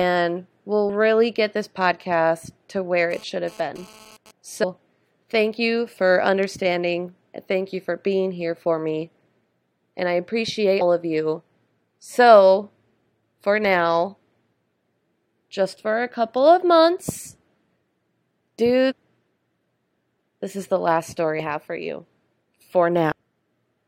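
At 0.88 s, just before "really get this podcast", the decoder drops compressed frames, skipping roughly 150 ms of speech in steps of about 23 ms frames. Overlapping neighbour frames soften each join into a short smeared blip rather than a click.

From 3.11 to 4.31 s, a nearby 2G phone transferring data has its radio bursts rectified by the audio circuit, producing a raspy 217 Hz GSM phone buzz with many harmonics at about 26 dB below the speech, coming and going.

Further compressed frames are skipped at 4.62 s (around 300 ms lost), 10.80 s between "I appreciate" and "of you" (about 200 ms), 17.81 s after "a couple of months", 18.90 to 18.93 s (about 400 ms), 21.39 s, and 23.11 s (about half a second). Each is a smeared jump forward.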